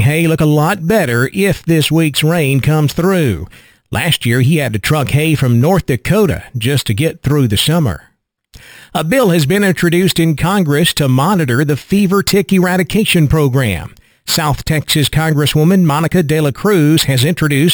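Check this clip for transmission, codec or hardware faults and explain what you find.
One fault runs through the whole speech clip: imaging from sample-and-hold upsampling. Each sample was simply repeated, which fits a 12 kHz rate raised to 48 kHz. Mirror copies of the speech spectrum fill 6 to 12 kHz, about 17 dB down. They add a bright metallic fizz that rises and falls with the voice.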